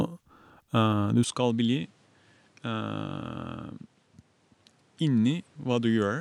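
An input switched to a poorer device at 1.24 s, and the change lasts to the end of the clip. With no gap at the switch, the speech abruptly turns duller and quieter, dropping by around 10 dB, and nothing remains above 11.4 kHz. A new background noise appears, roughly 35 dB below the speech. The likely cause is the system moving to a different, narrower-band microphone mid-recording, one with its own tone, level and noise floor.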